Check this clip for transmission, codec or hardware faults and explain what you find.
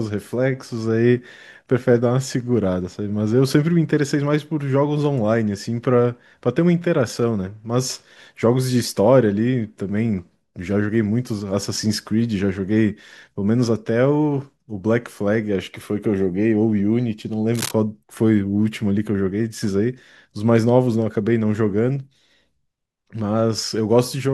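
One hardware fault stands out: a burst of cable scratch noise from 17.54 to 17.71 s. For under a fifth of a second, a dense, ragged scratching and rustling sits over the speech, roughly 10 dB below it, then stops cleanly. The likely cause is a worn cable, connector or control being moved, so its contact resistance jumps around rapidly and injects uneven bursts of noise straight into the signal path.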